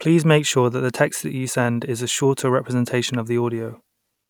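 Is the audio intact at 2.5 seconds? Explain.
Yes, the speech is intact at 2.5 seconds, with no dropout, click, distortion or other fault at that moment.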